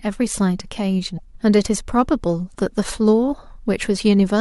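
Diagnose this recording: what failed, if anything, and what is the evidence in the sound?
Broken MP3 bit reservoir, 1.16 to 1.19 s, at the codec stage: a 30 ms disturbance breaks the speech, about one 26.1 ms frame long. Likely cause: frames were dropped, so the next frame pulled its borrowed reservoir bits from the wrong frame's data and decoded incorrectly.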